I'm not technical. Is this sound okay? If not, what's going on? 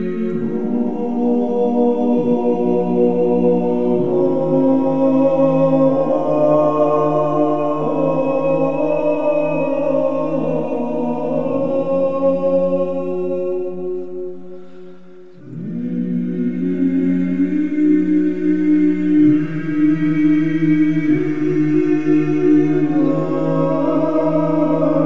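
Yes, nothing stood out as wrong when listening to this sound.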